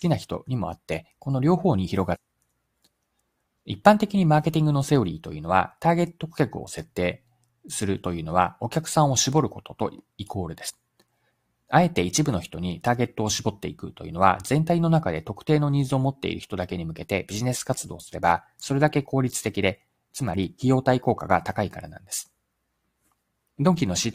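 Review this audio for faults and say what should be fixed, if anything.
Damaged data in a compressed stream occurs at 2.14 to 2.16 s and 10.68 to 10.71 s. Corrupted bytes make the decoder misread those frames and resync, leaving a short chirp, click or hole. On a spectrogram or waveform it shows as a brief vertical smear or gap. Prevent it by checksumming files and using reliable transfer.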